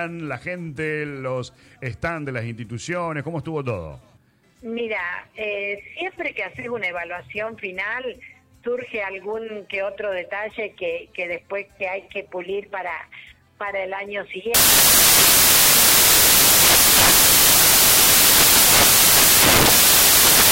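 Samples built from the wrong bytes take over from 14.54 s and continue to the end of the clip. From that point the reader is assembling each sample from mismatched bytes, whether shifted by one byte, swapped in order or misaligned, so the rapidly fluctuating low-order bits land in the most significant positions. The audio is replaced by loud, harsh broadband noise for the final six seconds or so.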